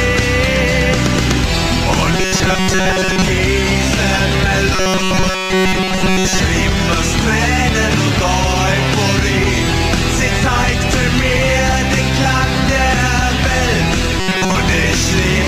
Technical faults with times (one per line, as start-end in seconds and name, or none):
2.14-3.28 robotic sound from repeated short buffers
4.75-6.40 robotic sound from repeated short buffers
14.20-14.56 robotic sound from repeated short buffers